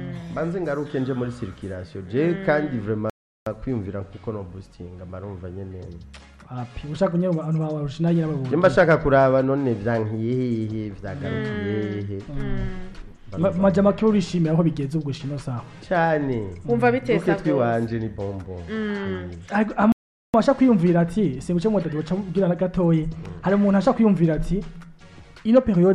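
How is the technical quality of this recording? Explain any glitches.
Two brief dropouts break the recording. At 3.10 to 3.46 s and 19.92 to 20.34 s, the sound cuts to silence for 0.37 s and 0.42 s, then resumes: a Bluetooth stall, likely where interference delayed packets and the headphone buffer ran empty.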